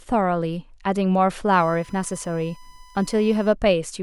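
A speech recording with USB whine from 1.53 to 3.53 s: a steady 1 kHz tone about 30 dB below the speech, matching the bus's 1 ms frame rate leaking through power or ground. Unlike 50 or 60 Hz mains hum, it sits high and pure, without a low buzz.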